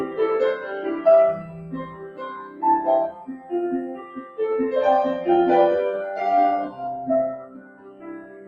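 A noise suppressor tuned for speech runs across the whole clip and treats steady, sustained parts of the sound as noise to be removed. Its gain rides up and down by around 15 dB as it decides what to keep, so the level pumps: onsets pass through, then held material and decays are pulled down under them. The audio arrives over an Opus call path whose top end stops near 12 kHz, with coding that fits a rate of about 32 kbps.

The suppressor cuts the sound hardest in four places. From 1.43 to 2.62 s, about a second of it sinks by up to about 12 dB. From 3.11 to 3.52 s the drop reaches about 8 dB, and from 3.95 to 4.38 s about 11 dB. From 7.39 s to the end the sound falls by up to about 13 dB. In each stretch, sustained or fading sound is held down or has its decay truncated.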